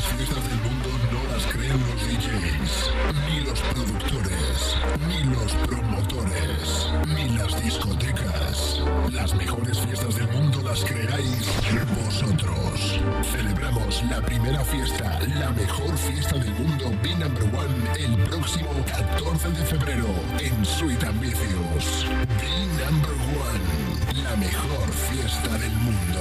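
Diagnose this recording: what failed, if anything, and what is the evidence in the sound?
Nothing in the signal chain shows a failure; no stage leaves an audible fault anywhere in the recording.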